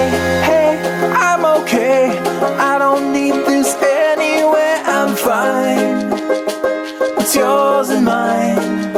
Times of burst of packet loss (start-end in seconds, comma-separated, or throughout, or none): none